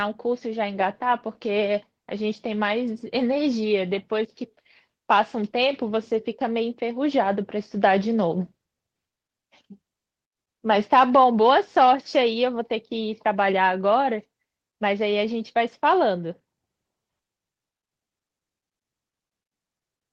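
No technical faults can be heard anywhere in the recording.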